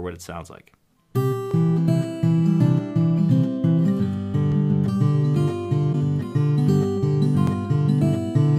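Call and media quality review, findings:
Overlapping chunks: chunker starts each roughly 3 s chunk about 7 ms before the previous one ends, so that sliver plays twice at each join. Audible as a brief click or stutter at 1.51 s, 4.52 s and 7.47 s, repeating at the chunk interval.

Broken MP3 bit reservoir, likely cause: a frame was dropped and the next frame's look-back into the reservoir read foreign bytes. Audio jumps ahead with a momentary disturbance from 5.92 to 5.95 s, about the span of one 26 ms MP3 frame.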